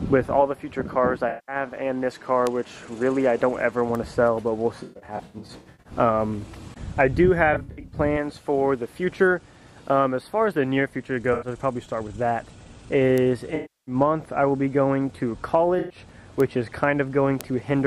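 At 1.29 to 1.56 s there is AAC frame loss with concealment: about 190 ms of coded data is missing, and the decoder fills the gap by reusing the last good spectrum. The result is a smeared, noisy patch instead of a hard dropout. A bit error spike at 2.47 s is a single sharp tick across the whole spectrum. It comes from a flipped bit that throws a short run of samples off by a power of two before they snap back. Another lone tick follows at 3.95 s. From 4.82 to 5.93 s the frame loss returns, scattered: about 580 ms of gaps spread over roughly a second. The longest run is around 150 ms, so the sound turns phasey and washed out in uneven bursts. The same scattered pattern appears at 7.53 to 7.97 s, with about 230 ms lost and no single gap much beyond 70 ms. A brief concealed loss of about 85 ms at 11.33 to 11.48 s leaves only a short smear. A further bit error tick lands at 13.18 s, just before a longer concealment at 13.55 to 13.95 s, where 320 ms is rebuilt as a smeared, noisy patch. 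A final concealed gap of about 110 ms comes at 15.79 to 15.98 s. Two more isolated ticks follow, at 16.40 s and 17.41 s, each unrelated to the surrounding sound.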